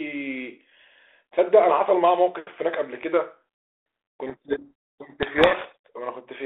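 Telephone-band speech, passing through G.726 at 32 kbit/s with only light coding hiss, suffers a codec payload misread from 4.26 to 5.88 s. The decoder takes the G.726 code words in the wrong bit order, burying the speech in harsh distortion. Unlike low-bitrate G.726 rasp, which follows the level throughout, it starts and stops abruptly.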